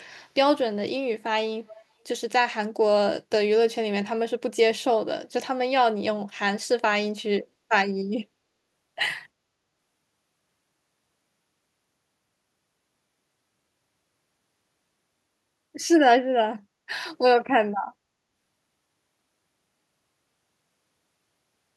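At 1.26 s there is a bit error spike. One sample jumps far from where it should be and snaps straight back. A single flipped bit did this, pushing the value off by a power of two. It lands as one sharp tick. The click is broadband and has nothing to do with the speech around it. It lasts only that one sample.

From 1.67 to 1.83 s a faint second copy of the voice trails the original. It sits roughly 330 ms behind and well down in level, perhaps 25 dB below the speech. The scrap is brief. This is likely an echo leak. A far end playing the call over a loudspeaker let some of its microphone pickup slip past the echo canceller, and that residue came back down the line.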